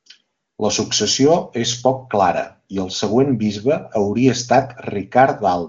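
Nothing is technically wrong with this speech clip, which comes through the AMR wideband (HD Voice) path as expected, with content reaching up to about 7 kHz and nothing above that.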